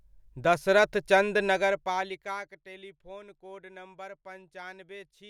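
No technical faults can be heard anywhere in the speech.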